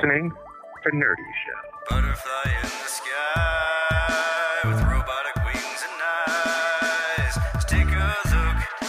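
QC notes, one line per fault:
No faults heard at any point in the audio.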